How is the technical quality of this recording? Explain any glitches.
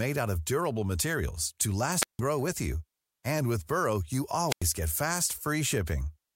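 The recording has two glitches, both wireless microphone squelch dropouts. The first runs from 2.00 to 2.21 s, after "of durable materials to" and before "grow with you", with a mute of about 160 ms. The second runs from 4.47 to 4.64 s, just before "get fast", with a mute of about 94 ms. The microphone's radio signal fades, and the receiver's squelch shuts the output. Each is heard as a short rise of hiss or static, a hole of near silence, and then the speech returning.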